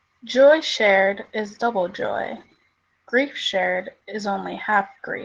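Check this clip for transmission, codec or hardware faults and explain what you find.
One codec fault runs through the whole clip. Opus voice compression, in what sounds like hybrid mode at a rate pointing to 16 kbps, codes the excitation coarsely, leaving the speech plainly hoarse and slightly robotic.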